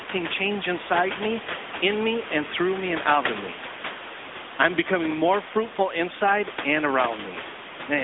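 From start to finish the speech carries AMR narrowband mobile codec damage. The line passes only about 200 Hz to 3.6 kHz, so the sound is thin and boxy, and the vocal-tract model rebuilds each 5 ms from a few pulses, giving a plainly buzzy, synthetic edge. That points to a mid-rate mode around 10.2 kbps. The room noise, about 9 dB under the speech, takes on a swirling warble. On a spectrogram, energy stops sharply at 3.6 kHz with nothing below 200 Hz.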